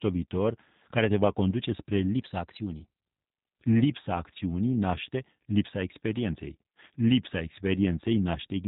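Speech, carried throughout by the G.729 codec, and the damage is plainly audible. Everything is rebuilt from a vocal tract filter, a pitch predictor and a few pulses per frame, so it comes out rough and slightly synthetic, consistent with an 8 kbit/s stream. On a spectrogram, energy stops dead at about 3.8 kHz with nothing above it, and the harmonics below look smeared and blocky in 10 ms steps rather than smoothly traced. Between 2.14 and 3.07 s the speech suddenly runs about 5.3% fast and rises about 90 cents, close to a semitone, then snaps back. This is likely a drift correction step, where clock-matching software briefly changed the playback rate to rebalance its buffer. On a spectrogram the harmonic lines jump upward for that stretch and drop back at 3.07 s. In the waveform the periods compress slightly over the same span.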